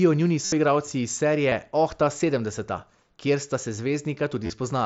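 Concealed Bluetooth headset packet loss appears at 0.45–0.52 s, where 75 ms of lost packets are filled with repeated waveform, heard as a buzzy held tone with a warble on return. The spectrogram shows flat harmonic stripes and the waveform shows a periodic, constant-level stretch. A brief, nearly hidden loss falls at 1.50 s, and scattered losses across 4.44–4.50 s, with a longest run of 30 ms, leave short repeated segments.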